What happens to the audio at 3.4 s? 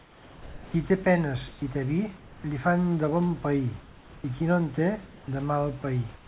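Nothing goes wrong at 3.4 s: the speech carries straight through that moment with no dropout, glitch or distortion, heard through the same telephone-band call path (nothing above 4 kHz) and the quiet room noise that sits about 29 dB below the speech.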